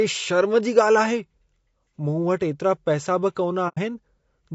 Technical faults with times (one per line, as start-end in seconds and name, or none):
0.00-4.54 low-delay AAC compression
3.68-3.78 AAC frame loss with muting